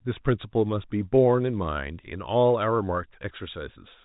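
No technical faults can be heard in this speech clip, which comes through the ordinary telephone channel with nothing above about 3.8 kHz.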